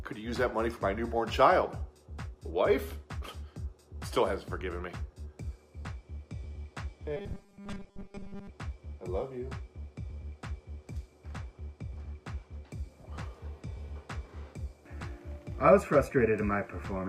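From 7.17 to 8.50 s the sound collapses into a stiff, metallic buzz at 200 Hz. That's robotic sound from repeated short buffers, likely a starved stream looping a 5 ms chunk to cover most of the missing audio while the real material gets skipped.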